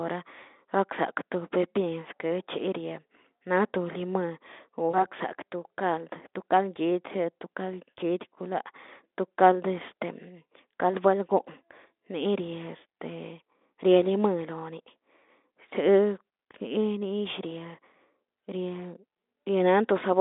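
At 4.89 s the speech breaks up in a short episode of VoIP packet loss concealed by the speech codec, lasting until about 5.06 s. Roughly 40 ms of audio went missing, which fits two lost 20 ms frames. The decoder filled the gap by extending its last pitch and spectral envelope at falling gain, giving a brief stretched sound, a buzzy tone or coloured noise that fades. Because each rebuilt frame feeds the next, the speech stays weak or distorted for a short while after packets resume. The underlying Speex path, band-limited to roughly 250 Hz to 3.6 kHz, shows at most faint coding roughness.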